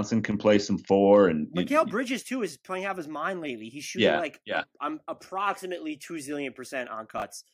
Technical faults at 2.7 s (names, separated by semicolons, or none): none